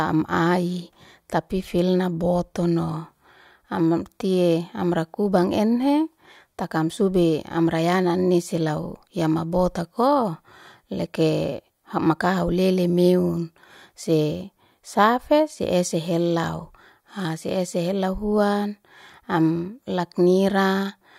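Nothing stood out as a technical problem when listening to the recording of speech.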